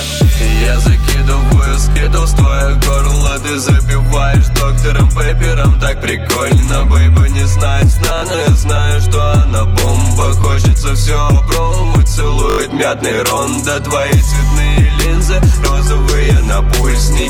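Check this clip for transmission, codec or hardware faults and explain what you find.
There are four playback stutters. At 1.92–1.96 s, 8.18–8.22 s, 10.42–10.44 s and 12.50–12.58 s, fresh audio reached the device late, so it replayed its last chunk. This is a repeated buffer. Each time a piece, consistent with a 20 ms buffer, sounds two to five times with hard joins, giving a brief buzzy stutter and skipping a few tens of milliseconds of sound.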